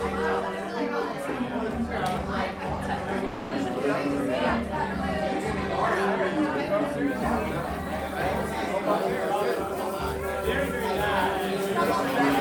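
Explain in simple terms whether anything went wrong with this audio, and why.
At 3.26 seconds the sound breaks off. For about a quarter of a second, until 3.52 seconds, it becomes a fading buzz or hiss. Then it resumes, with that part missing. This is a long network dropout, likely caused by audio lost in transmission.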